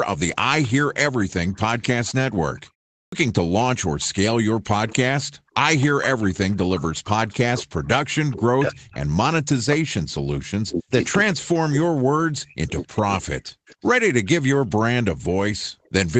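Echo leak runs through this speech recording from 0.35 to 5.85 s, and briefly again at 10.67 to 11.36 s, 12.81 to 13.86 s and 15.84 to 15.90 s. Each time a faint copy of the talker trails the original by 263 ms. It sits about 20 dB below the speech in the first stretch, about 25 dB below in the middle two and about 40 dB below at the end. The likely cause is a loudspeaker on the far end whose echo canceller let part of its microphone pickup return down the line. Background gated by the echo canceller appears at 2.68 to 2.83 s and again at 15.72 to 15.84 s. For a split second the room sound falls away, by about 25 dB and then about 39 dB, because the canceller pulled the microphone down hard while the loudspeaker was active, then released it. Clipped start after a pause follows at 2.99 s. After a 0.32 s gap the next speech enters abruptly, with its first 134 ms missing, as the output device needed that long to wake and lock onto the signal before anything was reproduced. 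Speech suppressed in double talk spans 5.49 to 13.21 s. The talker's voice repeatedly dips, by as much as about 40 dB, over roughly five seconds in total. This is likely because both sides spoke at once and the echo canceller, unable to separate the local voice from loudspeaker echo, attenuated everything.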